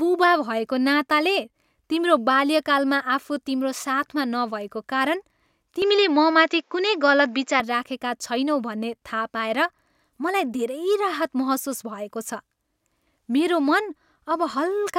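From 5.82 to 7.60 s the speech suddenly goes duller and a bit boxy, with nothing above 7.6 kHz, then opens back up. It sounds like an input switched to a poorer device, most likely another mic or a headset's call profile taking over briefly. There's no gap at the switch, but the level shifts by around 5 dB and a faint new noise floor, roughly 45 dB down, comes in with it.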